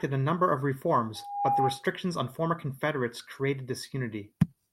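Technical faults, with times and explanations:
1.15–1.87 s, loudspeaker feedback squeal: just after "a number of", a steady tone near 809 Hz rises out of the speech over roughly a third of a second and settles at about 5 dB above it, then cuts off before "on former". The microphone was hearing its own loudspeaker, and at that one frequency each trip round the loop came back louder than it left. A spectrogram shows a single bright horizontal line that thickens as it grows, and the waveform's envelope swells into a smooth, even band.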